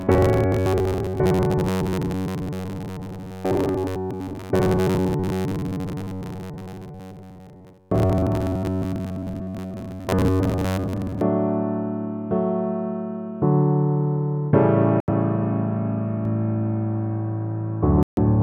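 From 0.01 s to 11.22 s there is robotic sound from repeated short buffers. The sound becomes a rigid, metallic buzz at 93.8 Hz. Most of the real audio is skipped. The likely cause is new audio arriving too seldom, so a chunk of about 10.7 ms is looped, fixing the pitch.

At 15.00 s a Bluetooth stall cuts the sound to silence for 77 ms. Then it picks up again. Interference likely held packets back. The headphones' buffer ran dry, and playback waited for the resent data.

At 16.25 s a doubled audio track begins and runs to the end. A second full-band copy follows about 150 ms behind, roughly 5 dB quieter. It is likely a second, slower capture path. The copy starts abruptly and has no decay or room colour.

At 18.03 s a second Bluetooth stall drops the sound for 144 ms, under the doubling. Playback resumes after the gap, again likely from delayed packets.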